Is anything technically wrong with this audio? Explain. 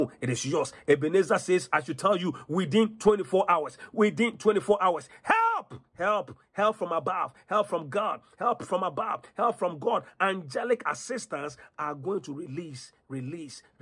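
No, nothing in the signal points to a technical problem; it holds steady throughout with no audible disturbance.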